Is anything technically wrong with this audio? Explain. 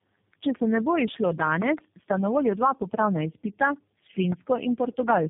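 Yes, there are two faults.

Tandem speech coding runs through the whole clip. The speech sounds rough, muffled and warbly, with nothing above about 3.7 kHz. The pattern fits a call passing through three low-rate speech codecs in a row, likely a G.729A, then AMR-NB, then G.729A again, each decoded back to ordinary telephone audio before the next re-encoded it. Every coder then discards detail and adds its own artefacts on top of the previous one's errors. A single narrowband codec would sound thin but steady. Here the swirling, smeared quality of stacked losses is what marks it as tandem coding.

A loud pop occurs from 4.32 to 4.34 s, a single sharp burst peaking about 20 dB above the speech. It is likely caused by a sudden voltage step or pulse, such as a plug, switch, static discharge or driver glitch, added to the signal and shaped by the circuitry after it. The speech continues underneath without a gap, which distinguishes it from a dropout or a packet-loss click, where the audio itself breaks.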